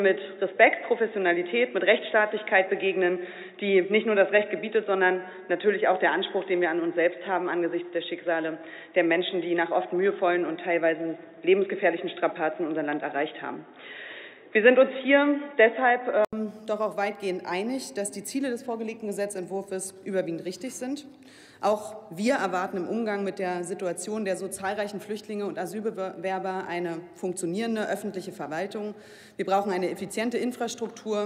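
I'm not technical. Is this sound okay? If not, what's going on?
No. For the first 16.3 seconds the sound is dull and boxy, with no crisp top end. Around 16.3 s there's a brief gap of about 80 ms, then it suddenly turns clearer and the loudness shifts. This is likely an input switched to a poorer device.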